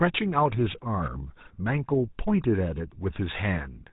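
A short speech recording with GSM full-rate codec damage running through the whole clip. The sound has a plainly audible buzzy, gravelly roughness, because the codec rebuilds the voice from a vocal-tract model driven by a coarse, regularly spaced pulse excitation. The rasp fits the 13 kbps GSM full-rate codec. On a spectrogram, energy stops abruptly at 3.8 kHz, and the harmonics look smeared and grainy. The waveform looks jagged and pulse-like.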